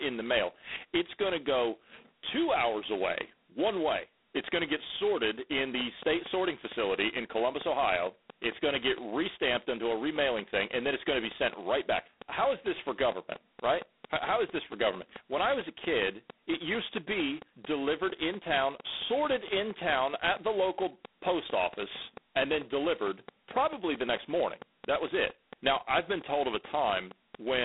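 From the start, the speech runs through G.726 ADPCM with heavy damage. Each sample is coded as a small difference from a predicted value. Too few bits leave large errors. A harsh, rasping hiss rides on the speech and rises and falls with its level. That grain fits the 16 kbit/s rate. The band is narrow, about 250 Hz to 3.6 kHz. Nothing above 3.9 kHz gets through.

At 5.58 s, just after "going to get sorted", a train of clicks begins. It runs to 27.58 s. The clicks come at a steady 4.41 per second, about a hundred in all. Each has much the same sharp shape. They peak around 10 dB above the speech, so they stand out clearly. The ticking carries on through pauses too. Interference from nearby equipment is the likely cause.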